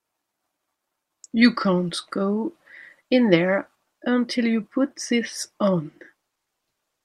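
No technical faults are audible.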